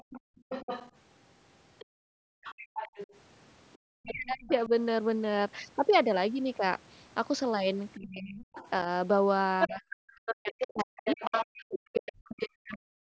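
Right from 0 s to 4.52 s there's a second, quieter voice sitting under the talker, well down in level, a case of the other side's voice leaking through. That's most likely loudspeaker playback the echo canceller didn't fully scrub out of the microphone.

Overlapping that, between 0.03 s and 2.44 s, you get background gated by the echo canceller: the room tone ducks out, about a second of it in total, dropping by about 38 dB at the deepest. The canceller is clamping the mic while the far end plays, then releasing.

From 3.83 s to 4.71 s the talker's own voice dips for the better part of a second, sinking by roughly 40 dB. That's likely speech suppressed in double talk, with both ends talking and the canceller turning everything down.

It gets worse later. From 7.97 s to the end, the same double-talk suppression pulls the talker's voice down for around three seconds in total. Meanwhile, from 8.33 s to 12.77 s, the other side's voice leaks through again, this time nearly as loud as the talker.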